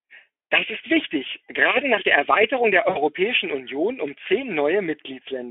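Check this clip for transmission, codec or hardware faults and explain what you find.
One transmission fault in this speech clip. Around 2.89 to 2.98 s there is VoIP packet loss concealed by the speech codec: roughly 60 ms of audio went missing, which fits three 20 ms frames. The decoder stretched its last pitch and filter with falling gain, so the sound turns into a brief buzzy tone or coloured noise that fades. On a spectrogram this shows as smeared, repeated harmonics that dim. In the waveform the envelope decays smoothly. The clip passes through a Speex link limited to about 300 Hz to 3.4 kHz.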